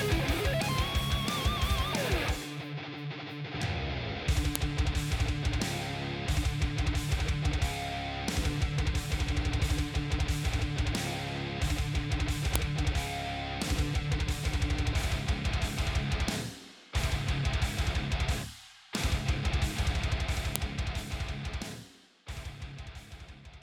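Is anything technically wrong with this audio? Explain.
Yes. A file header played as audio produces a sharp click at 4.56 s, 12.56 s and 20.56 s, exactly 8 s apart. The clip was joined from 8 s pieces whose WAV header bytes were left in and decoded as samples, so each join snaps regardless of the surrounding sound.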